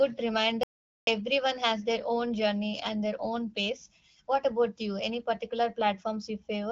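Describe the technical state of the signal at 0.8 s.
At 0.8 s the signal sits inside an audio dropout to silence running from 0.63 to 1.07 s, roughly 0.44 s of lost material. The input was likely cut off for that span while writing continued, so the file holds only silence, and the speech resumes abruptly on "has their own journey". Unlike a natural pause or concealed packet loss, nothing fills the gap: no room tone, no smeared or repeated sound, just dead silence with hard edges.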